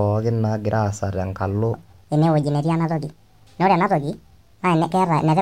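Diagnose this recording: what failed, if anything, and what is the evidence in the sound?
Section at the wrong speed from 1.74 s onward: speech runs 1.5 times fast, pitch up roughly seven semitones, likely a playback clock mismatch.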